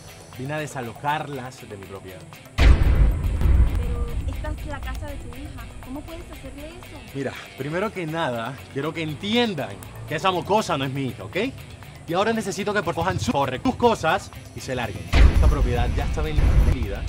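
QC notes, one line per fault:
3.07–3.76 s: chunks out of order. A block of about 341 ms plays one block late, so the sound jumps back and forward at three hard joins.
4.03 s: dropped samples. A single sharp click where the waveform skips ahead, likely a tiny gap of a fraction of a millisecond in the stream.
4.95 s and 9.83 s: electrical switching spike. A short sharp snap sits on top of the sound, likely an arc from a nearby switch or discharge picked up by the line.
12.97–13.65 s: chunks out of order. Another block of about 341 ms plays one block late, giving a brief jumbled moment.
15.36–16.72 s: chunks out of order. A block of about 341 ms arrives three blocks late, so a longer stretch plays scrambled.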